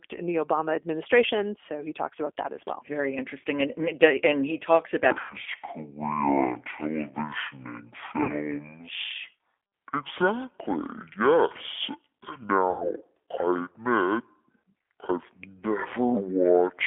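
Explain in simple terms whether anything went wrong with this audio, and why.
The speech went through the G.729 codec, a phone codec that rebuilds the voice from a simplified model. It sounds rough and synthetic, with nothing below 250 Hz or above 3.5 kHz.

VoIP packet loss concealed by the speech codec happens at 5.21–5.36 s, 8.23–8.35 s and 12.71–12.91 s. About 90, 60 and 90 ms of audio went missing, and the decoder filled each gap with a fading buzzy tone or coloured noise that lingers briefly afterwards.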